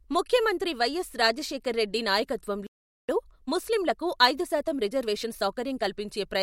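Speech, with a playback stall and a time-compressed catch-up. At 2.67 s the audio cuts out mid-flow. It stays silent for about 420 ms, until 3.09 s. The likely cause is a player that ran out of buffered data or had its output thread blocked. Nothing reached the output until it recovered. The silence sits inside the sound rather than at a natural pause. From 3.09 s to 5.89 s the speech runs hurried, at 1.15 times normal speed. The pitch stays where it was. This is time-compressed catch-up. The player is clearing its backlog by dropping short slices of audio and cross-fading across the gaps. That shortens the material without shifting pitch. After 5.89 s the pace returns to normal.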